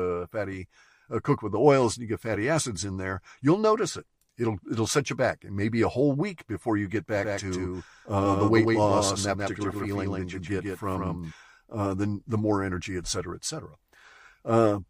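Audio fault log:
7.16–11.32 s, doubled audio track: after "week before you get", a second full-band copy of the speech trails the original by roughly 150 ms at about 5 dB lower, until just before "uh the the more". Unlike echo or reverb, it has no decay or room colour, and it starts and stops abruptly. The likely cause is a slower second capture path or two misaligned copies in an edit.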